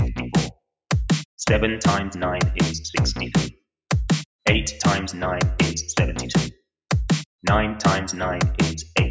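No technical faults are audible.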